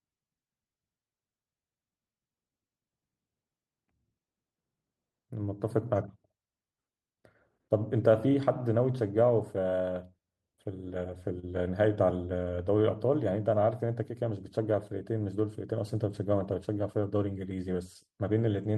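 At 11.39 s the speech briefly hangs: the sound in progress is drawn out for about 34 ms with a faint buzzy flatness, then carries on from exactly where it stopped, with nothing skipped. This is a short stall from a late packet. A packet of the call audio had not arrived when it was due, the jitter buffer ran dry, and the receiver stretched the last sound to fill the gap, adding 34 ms of delay.

From 14.14 s to 14.59 s the speech sounds slightly rushed, running at about 106% of normal speed while the pitch stays put, so the voice hurries rather than rising. This is a jitter buffer speed-up. With more audio queued than the buffer aims for, the receiver trimmed out short pitch-period-length slices one after another, taking away roughly 40 ms in total to pull the delay back down, all carried over the Opus call path with its 12 kHz bandwidth.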